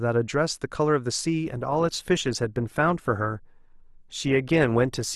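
At 1.46 s the speech drops abruptly to an adaptive stream at a lower bitrate and stays there to the end. Codec artefacts rise, with no gap at the switch, which fits Opus stepping down from roughly 64 to 24 kbit/s.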